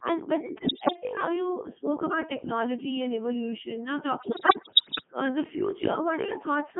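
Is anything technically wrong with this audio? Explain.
Yes, two problems. The whole clip goes through a Codec 2 vocoder, squeezed into a 150 Hz to 3.4 kHz band. Only pitch, voicing, level and spectral envelope survive, then get rebuilt from sine waves, so the speech comes out buzzy and robotic. The sound fits its highest 3.2 kbit/s mode.

There are also bit errors on digital voice radio from 0.64 to 0.96 s and again from 4.20 to 5.07 s. Corrupted bits, several percent up to roughly a tenth, scramble the frame parameters, so the synthetic voice lurches in pitch and level and warbles into bleepy gibberish.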